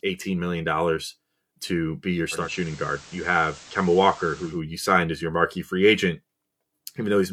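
From 2.31 s to 4.61 s the speech undergoes a digital radio blend to analogue: the receiver lost its digital stream and cross-faded, over roughly 0.2 s, to the station's FM broadcast, then back. During that stretch a hiss floor sits around 20 dB below the speech, and the level drops by about 2 dB. A spectrogram shows a noise haze underneath the speech, and the waveform shows a slight dip in amplitude.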